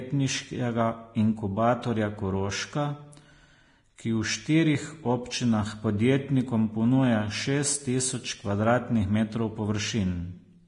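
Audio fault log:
Throughout: Vorbis compression. The speech is hissy, grainy and empty above 10.6 kHz, with blurred attacks, likely heavy Vorbis coding at a bitrate near 30 kbps.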